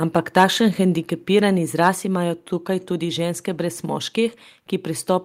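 From 0.16 to 0.44 s, the loudest speech peaks are flattened. This is microphone overload. The input level was likely set too high, pushing peaks about 4 dB past the converter's limit. A small fraction of samples are cut off, giving a harsh, crackly edge.

At 1.02 s, the whole level drops suddenly by 3 dB. Speech and background fall together in one step. This is microphone volume stepped down. The likely cause is the call software reacting to the earlier clipping and lowering the input volume.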